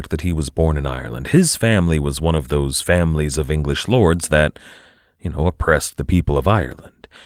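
No faults heard in the speech; Opus voice compression leaves only a light coding character.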